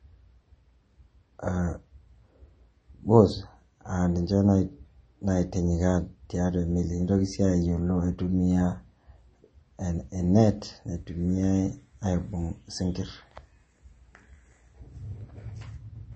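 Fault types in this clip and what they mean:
MP3 compression: the speech sounds watery and swirly, with nothing above 8.3 kHz, likely from low-bitrate MP3 encoding, consistent with around 32 kbps.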